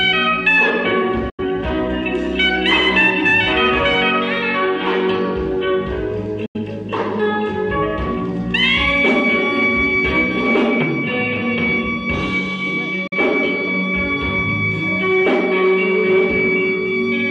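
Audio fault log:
1.29–1.43 s, 6.46–6.59 s, 13.07–13.14 s: digital broadcast dropout. The audio fades out over about 8 ms into silence, then returns later. The first two holes last about 130 ms and the third about 75 ms. The missing stretches fit whole lost frames, two frames in the first two and one in the third, which suggests failed frames that the receiver muted. Unlike a loose-connection dropout, there is no hard click, only a brief ramp. Unlike streaming packet-loss concealment, nothing is repeated or smeared, and the lost material is simply gone.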